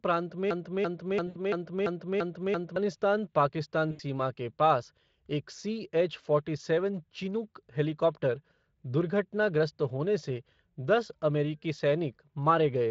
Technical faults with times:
0.51-2.76 broken-record loop
1.27-1.40 VoIP packet loss concealed by the speech codec
3.91-4.01 VoIP packet loss concealed by the speech codec

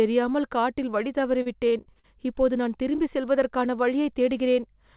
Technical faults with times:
1.42-2.05 repeated packet loss (robotic sound)

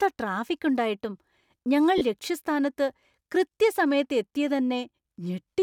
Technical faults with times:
1.98-2.01 lost LE Audio frames

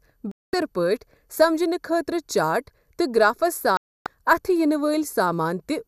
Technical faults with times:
0.00-5.87 channel delay (comb filtering)
0.31-0.54 digital broadcast dropout
3.77-4.07 digital broadcast dropout

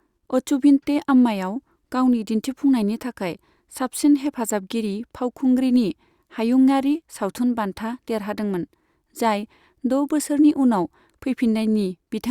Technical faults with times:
none

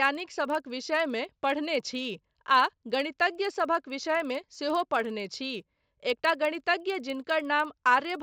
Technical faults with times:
0.00-8.22 resampler restarted on every block

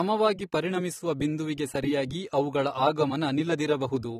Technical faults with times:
0.00-4.20 AAC compression

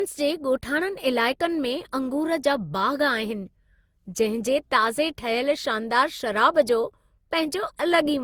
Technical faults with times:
0.00-8.24 generation loss

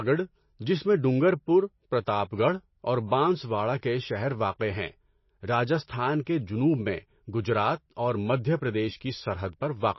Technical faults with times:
0.00-9.99 MP3 compression
4.59 pre-echo

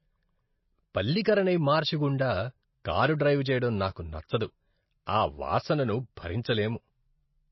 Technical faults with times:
0.00-7.52 MP3 compression

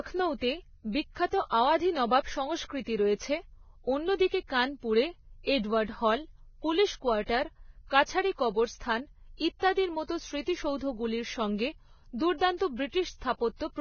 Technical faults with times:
0.00-13.80 Vorbis compression

